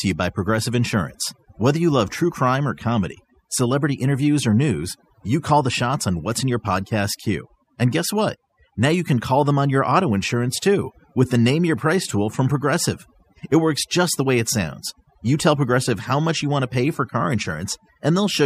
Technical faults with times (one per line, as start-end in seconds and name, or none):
0.00-18.45 overdone noise removal